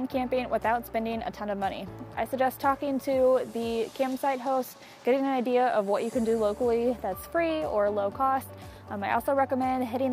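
A faint hiss and graininess rides on top of the audio for its whole length, swelling on loud, bright passages and disappearing in the quiet gaps. That pattern points to sample clock jitter: the converter's timing wanders by something under a microsecond, so each sample lands slightly off, and the resulting error, roughly 50 dB below the signal, grows wherever the waveform changes fastest.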